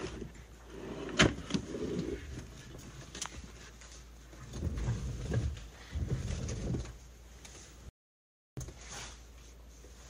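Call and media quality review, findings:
Audio dropout to silence, 7.89–8.57 s: sound cuts out for 0.68 s, silent, no room tone. Waveform shows a dead-flat line; spectrogram shows a full-height blank column. Likely input loss (device disconnect, link failure or mute) while the encoder kept writing zeros.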